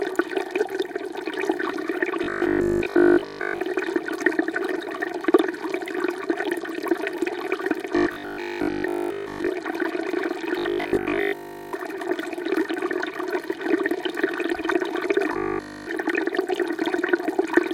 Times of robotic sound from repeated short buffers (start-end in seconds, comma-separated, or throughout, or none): 2.24-3.62, 7.96-9.48, 10.59-11.73, 15.33-15.87